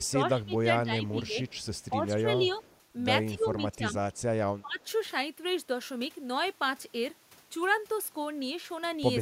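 A speech recording with two linked faults. The speech is suppressed in double talk from 0 to 1.36 s, 1.9 to 2.64 s, 3.34 to 3.96 s and 4.61 to 4.85 s. The level dips by up to about 20 dB there. The likely cause is an echo canceller ducking this talker while the far side speaks. Echo leak appears at 1.47 to 1.85 s, 2.5 to 2.78 s, 4.13 to 4.21 s and 4.82 to 4.87 s. A faint copy of the speech follows 252 ms behind, some 30 to 40 dB down. This likely comes from a loudspeaker's echo not being fully cancelled.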